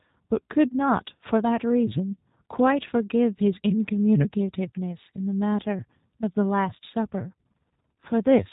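Right through the speech there's G.729A coding: nothing above 3.8 kHz, and a rough, buzzy, synthetic edge that fits an 8 kbit/s pulse-based rebuild of the voice.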